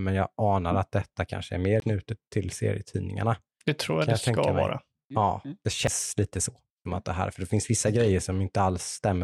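At 1.80 to 1.82 s, after "detta kanske är mer", and at 5.87 s, after "ja mm det", there's a CD skip: the laser jumped tracks, giving a tick, a short mute and an abrupt jump.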